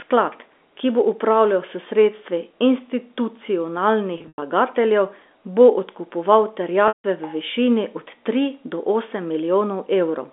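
Packet loss with pitch repetition hits twice. From 4.18 to 4.42 s, about 160 ms goes missing in gaps scattered over 240 ms. The receiver repeats the last pitch period to fill each hole. The longest run, 100 ms, outlasts the 50 ms fade and drops briefly to silence. At 6.88 to 7.04 s, between "bo odkupoval" and "v višini od tri", another 160 ms vanishes, fading into silence before speech returns with a short cross-fade. Both losses fit runs of 20 ms packets over the narrow 250 Hz to 3.6 kHz telephone band.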